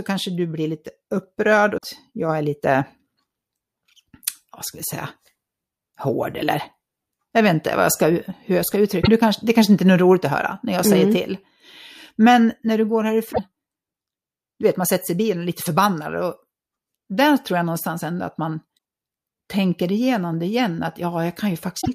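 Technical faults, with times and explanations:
1.74–1.84 s, 9.00–9.08 s, 13.29–13.40 s, 18.74–18.77 s and 21.77–21.88 s: damaged data in a compressed stream. Corrupted bytes make the decoder misread frames and lose sync until it finds the next header. This gives brief chirps, squawks, clicks or short holes of about 30 to 110 ms in the speech: after "du blir lite upprörd" and before "jag är lite", after "när du går", and after "någonstans ändå att man".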